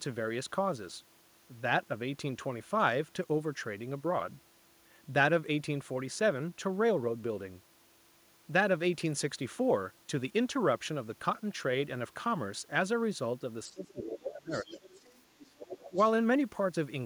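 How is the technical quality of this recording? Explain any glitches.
The recording has two echo-canceller problems in its last few seconds, both during moments when two people seem to be talking at once.

Speech suppressed in double talk happens from 13.68 to 14.79 s, with a shorter dip from 15.90 to 15.97 s. The voice sinks for about a second, dropping by as much as 30 dB, and then dips by about 10 dB. The likely cause is the canceller failing to separate the talker from the incoming echo and turning everything down. Unlike a network dropout, the loss tracks the other side's speech.

The other side's voice leaking through appears from 14.51 to 15.18 s and again from 15.39 to 16.04 s. A second voice comes in roughly 20 dB and then 15 dB below the talker, likely because the canceller left some loudspeaker echo in the microphone signal. Unlike reverb, it is a separate voice, not a tail of the talker's own voice.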